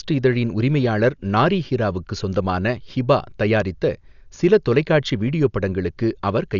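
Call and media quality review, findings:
Speech dull across the whole clip, nothing above 6.9 kHz, rough fluttery noise hanging around voiced sounds. Likely Dolby Digital compression at heavy settings: band narrowed, empty lines filled with dither. Fits a very low bitrate, around 48 kbps.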